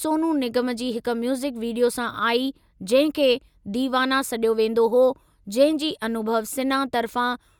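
No technical faults can be heard anywhere in this speech recording, so there are none to describe in time order.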